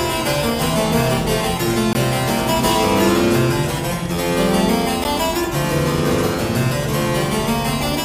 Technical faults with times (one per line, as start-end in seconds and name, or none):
1.93-1.95 block of digital silence
5.04 block of digital silence